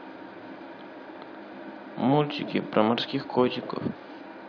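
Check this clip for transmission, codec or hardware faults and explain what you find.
Nothing in the speech signal points to a transmission, codec or hardware problem; the clip is clean throughout.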